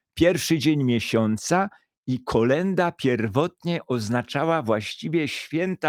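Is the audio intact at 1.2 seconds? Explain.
Yes, at 1.2 seconds the audio is intact, with no dropout, click, distortion or other fault audible at that moment.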